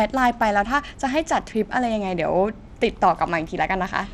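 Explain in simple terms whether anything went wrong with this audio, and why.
Bluetooth SBC compression is audible throughout the clip. The speech sounds gritty and dulled, with the crisp high end thinning and flickering. It likely comes from Bluetooth's basic codec, which splits sound into bands and gives the highest bands too little detail.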